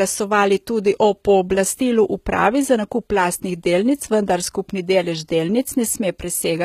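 All the way through, this speech has the sound of HE-AAC compression at a very low rate, something like 20 kbps. The treble is likely rebuilt by band replication, so the s sounds come out gritty and lispy, with nothing above 14.9 kHz.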